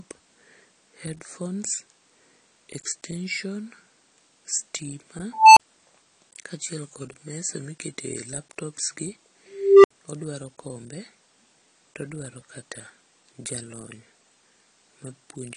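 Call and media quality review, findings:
Throughout: speech dull and smeared, codec damage plainly audible, hard band limit with nothing above 15.3 kHz. Cause likely AAC compression (AAC-LC), quantisation and lowered cut-off consistent with roughly 32 kbps.

5.32–5.60 s: tone near 1 kHz swells over 241 ms, clips, then 32 ms dropout. 9.48–9.91 s: tone around 400 Hz, 361 ms build-up, 65 ms silence. Unstable filter: recursive stage with bad coefficients diverges, overflows, mutes until reset.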